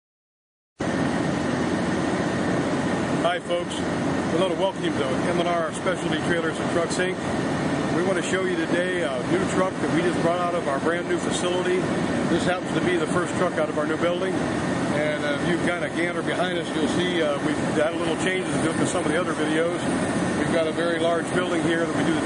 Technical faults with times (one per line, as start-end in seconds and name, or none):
0.00-22.25 MP3 compression
0.76-0.80 pre-echo